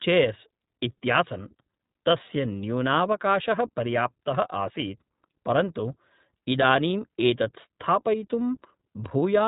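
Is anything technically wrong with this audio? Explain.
Yes. Throughout the speech there is iLBC codec damage, and it is plainly audible. The band stops at about 3.8 kHz, so sibilants and consonant detail are dulled to a narrowband telephone quality. iLBC codes each short frame's excitation independently rather than predicting from the previous frame, and the coarse, frame-by-frame character here fits 20 ms frames at the codec's higher rate of about 15 kbps. The result is intelligible but slightly rough and synthetic-sounding.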